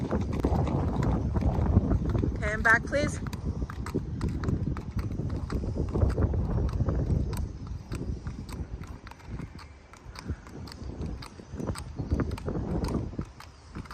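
A 40 ms chunk of audio was delivered late and played two chunks after its proper place, so the chunks out of order span roughly 0.32 to 0.44 s of this audio. No material is missing. The three 40 ms pieces are simply shuffled, which creates three hard joins where the waveform jumps. The result is a brief jumbled, garbled moment near the start.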